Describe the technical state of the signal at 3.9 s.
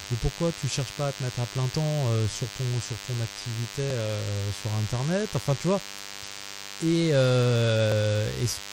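Two stream segments carry overlapping time stamps, so the player trims about 20 ms from 3.90 to 3.92 s of speech that was never duplicated, and the waveform jumps as a short click or skip. The segment boundaries fit a 4-second segment length. Underneath, a nearby DECT cordless phone buzz persists: radio bursts every 10 ms are rectified in the audio circuit, giving a thin, steady 100 Hz buzz with many harmonics, roughly 15 dB below the speech.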